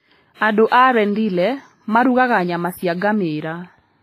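Across the whole speech clip the sound is ringing and washy, with a hiss that swells and fades along with the speech and nothing above about 15.3 kHz. The likely cause is heavy WMA compression. This transform codec quantises long blocks coarsely, which smears the noise over tens of milliseconds and zeroes weaker spectral lines. The degree of damage points to a low bitrate in the region of 24 kbps.

At 0.68 s a brief hiss rises just before a sharp attack and lasts about 41 ms, leaving the onset soft and blurred. It happens again at 2.97 s, straight after "marugaga nyama cia", this time for about 44 ms. This is pre-echo. Each attack landed late in a transform block, so the quantisation noise sized for the loud onset was spread across the whole block and filled the quiet gap in front of it.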